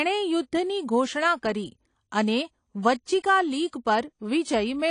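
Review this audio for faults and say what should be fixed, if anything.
The speech sounds dull and smeared across its whole length, with a fizzy, warbling texture on sibilants and held sounds, and nothing is present above 10.1 kHz. The likely cause is AAC compression. An AAC-LC encoder starved of bits cuts the top of the spectrum and coarsely quantises what remains, leaving gaps and swirling artefacts, and the damage here fits a rate of around 32 kbps. To prevent it, encode at a higher bitrate or keep a lossless master.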